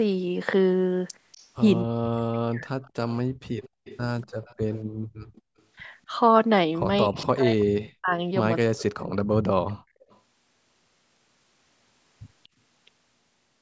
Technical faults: echo leak; speech suppressed in double talk; background gated by the echo canceller

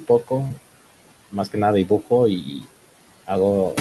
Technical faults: noise suppressor artifacts; short concealed packet loss

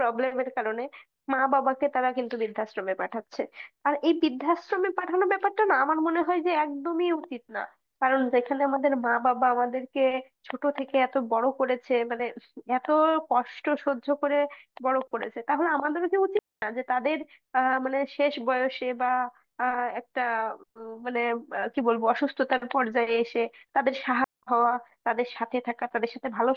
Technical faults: digital wireless dropout

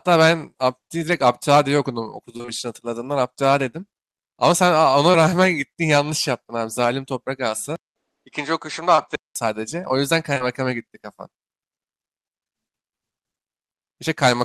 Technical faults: short concealed packet loss; input switched to a poorer device

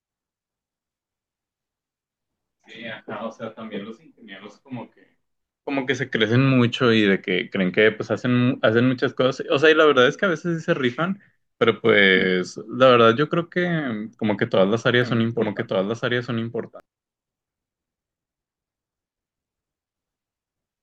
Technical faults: doubled audio track

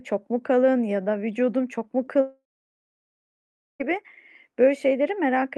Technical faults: short concealed packet loss; long network dropout

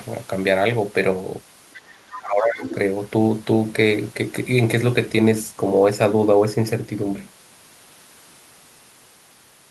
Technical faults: other side's voice leaking through; speech suppressed in double talk

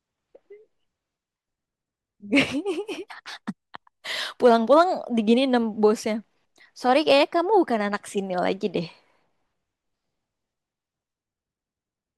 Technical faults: hard clipping

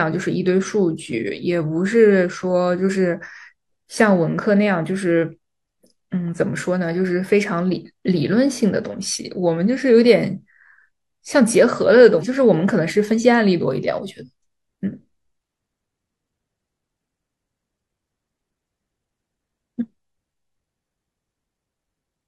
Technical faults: damaged data in a compressed stream

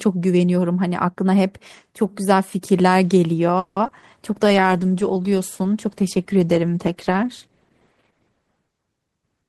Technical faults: repeated packet loss (robotic sound); call bitrate drop; jitter buffer slow-down; jitter buffer speed-up

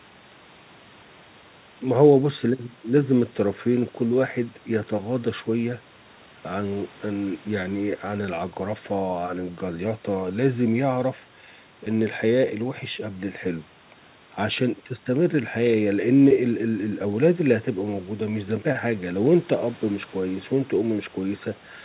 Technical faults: none

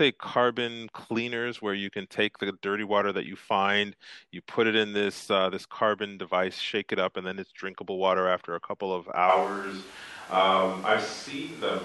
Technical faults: switch to a distant microphone

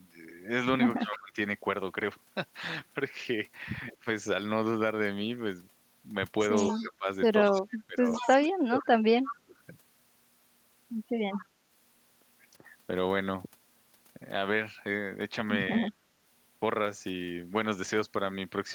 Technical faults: speech suppressed in double talk; echo leak

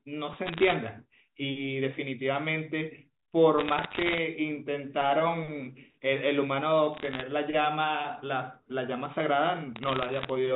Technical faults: bit errors on a digital phone line

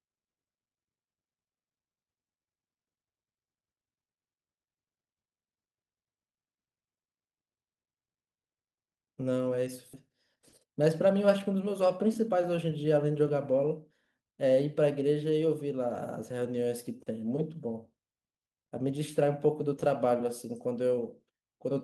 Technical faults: skip ahead; jitter buffer speed-up

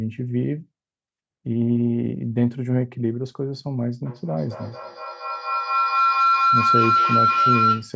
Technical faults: feedback howl

